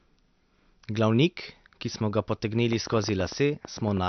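MP3 compression, throughout: nothing reaches above 6.1 kHz and the speech sounds plainly watery and swirly, likely from a starved encoder at a low bitrate near 52 kbps.

Train of clicks, 2.73 to 3.98 s, just after "ki smo ga": roughly fifteen irregular pops at about 9.6 per second, peaking about 10 dB above the speech, likely interference or a faulty connection.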